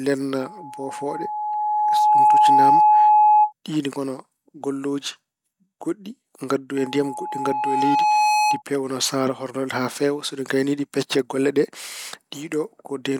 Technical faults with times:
0.40-3.53 loudspeaker feedback squeal
6.77-8.62 loudspeaker feedback squeal

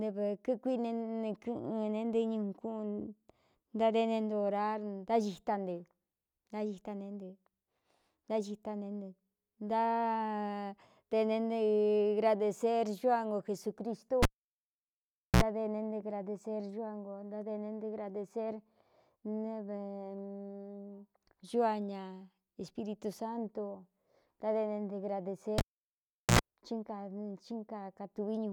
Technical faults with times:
14.23-15.43 cable pulled and plugged in
25.58-26.39 cable pulled and plugged in

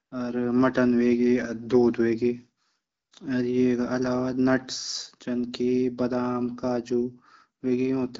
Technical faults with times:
0.05-0.11 AMR comfort noise
2.91-3.11 AMR comfort noise

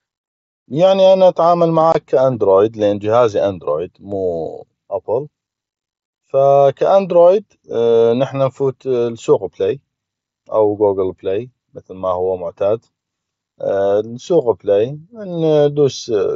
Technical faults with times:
1.92-1.95 unconcealed Bluetooth headset packet loss

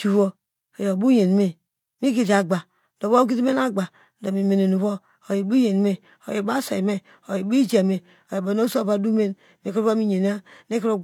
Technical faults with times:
none

